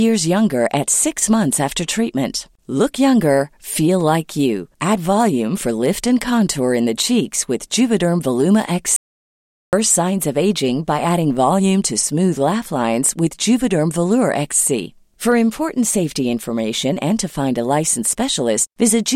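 An audio dropout to silence runs from 8.96 to 9.73 s: the speech cuts off mid-flow into silence with no room tone for about 0.77 s, then resumes at "signs of aging by". The input was likely lost while the recorder kept writing silence.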